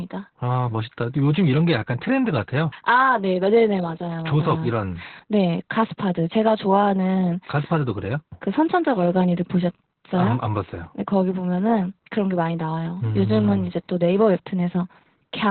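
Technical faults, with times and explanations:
Throughout, Opus voice compression: the speech has nothing above about 4.3 kHz, giving a narrowband, telephone-like dullness, and the heavy coding damage makes it hoarse and faintly robotic. The SILK predictor keeps the vocal-tract shape but codes the excitation coarsely, which fits a bitrate near 8 kbps with 20 ms frames. A simple low-pass filter would leave the remaining band clean, but here the roughness in the voicing itself points to the codec.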